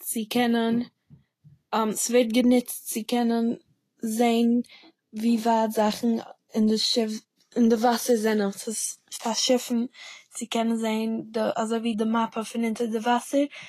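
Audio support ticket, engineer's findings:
Throughout: grainy, hissy treble, nothing above 14.2 kHz; likely Vorbis compression near 33 kbps. Treble fine detail turned to fizzy noise, not a plain low-pass's clean dullness.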